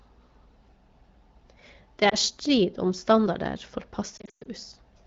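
At 2.09 to 2.15 s, just before "strid om standarder", the speech dips and warbles briefly, consistent with a single lost AMR speech frame. The decoder covered the gap by repeating the last good pitch and vocal-tract settings at reduced gain. From 4.18 to 4.47 s the damage is heavier: losses scattered over about 280 ms, with a longest run of 120 ms, drop the sound to near silence within two frames, and leave it rough as it recovers.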